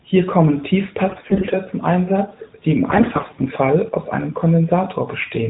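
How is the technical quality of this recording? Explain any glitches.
The speech sounds like a narrowband mobile call, and it has two short bursts of AMR bit errors. From 1.10 to 1.55 s, and again from 2.90 to 3.49 s between "die im" and "aus einem", the less protected bits in the codec frames got flipped on a weak link. Pitch and level roughly hold, but misplaced excitation pulses and off spectral values make it hoarse and gargly. The first burst is rougher, with around one bit in seven damaged versus about one in fourteen in the second.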